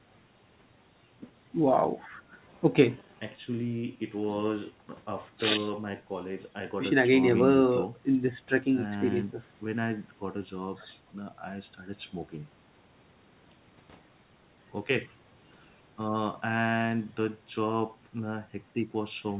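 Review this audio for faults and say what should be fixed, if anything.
Nothing needs fixing, as the speech carries no faults and simply shows the expected narrowband character of a G.711 call path, with nothing above 4 kHz and the lowest bass trimmed by the call's microphone processing.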